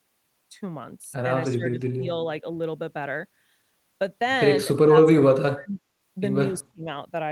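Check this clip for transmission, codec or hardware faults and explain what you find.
Three stretches of the speech dip sharply: 1.46 to 2.08 s (about 20 dB down, for roughly 0.4 s), 4.85 to 5.81 s (about 35 dB, most of that stretch), and 6.71 to 6.87 s (about 30 dB). This is likely speech suppressed in double talk, an echo canceller ducking the talker while the far side also spoke.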